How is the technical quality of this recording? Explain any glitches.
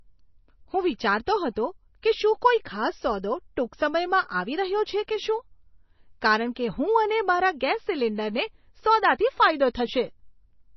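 The recording has heavy low-bitrate MP3 compression damage running through the whole clip. Nothing comes through above about 5.9 kHz, and the speech has a watery, swirly edge with smeared attacks and chirpy s sounds. That's likely MP3 compression, with a hard treble cut and weak frequency lines flickering on and off, which fits a bitrate around 24 kbps.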